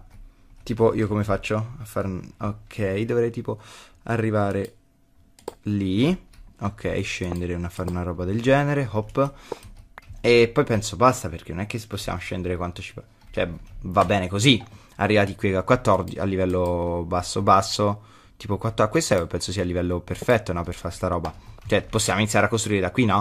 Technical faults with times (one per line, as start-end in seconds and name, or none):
none